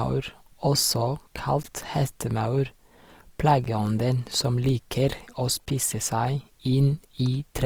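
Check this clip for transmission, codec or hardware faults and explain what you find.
Two faults are present: codec damage across the whole clip and three brief dropouts at regular spacing.

Opus compression, throughout: the encoder was likely Opus in its music (CELT) mode, short of bits, which fits a rate of around 24 kbps. It kept band energies but filled starved bands with folded or noise content, so the speech sounds plainly grainy and rough rather than swirly, while the full bandwidth up to about 20.4 kHz remains.

Gap between chunks, at 1.63, 3.64 and 5.66 s: the audio was delivered in 2-second chunks, and silence was left at each join. No sound is lost, but the speech is cut by a 12 ms hole every 2 seconds.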